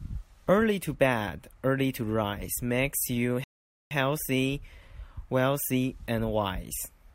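At 3.44 s the speech drops abruptly into silence and stays there until 3.91 s, when it picks up again at exactly the point where it broke off, with nothing skipped. This is a rebuffering stall: playback consumed all the audio it had downloaded and had to wait for more data before it could continue. No audio is lost, but the pause adds about 471 ms to the clip's running time.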